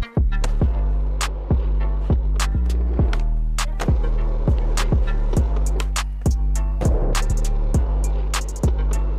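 No technical faults can be heard anywhere here.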